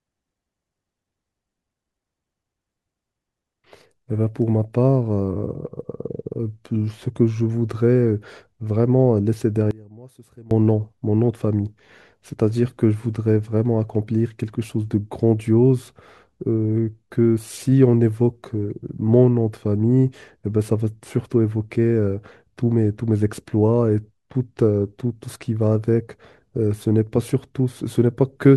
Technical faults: one channel inverted

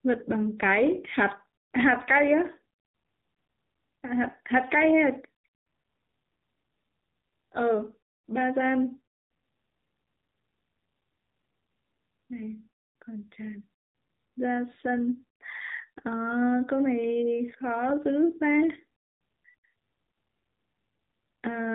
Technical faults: AMR narrowband mobile codec

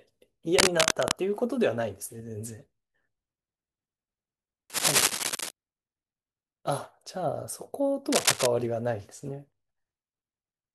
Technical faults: cable scratch noise

